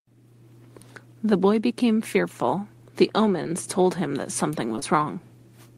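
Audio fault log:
3.43 to 3.47 s, short concealed packet loss: About 20 ms of speech arrived too late. The receiver extended the preceding sound to fill the hole, then blended back, leaving a brief smear.
4.75 to 4.84 s, short concealed packet loss: Two back-to-back 20 ms gaps were patched the same way. The longer continuation makes a wobble.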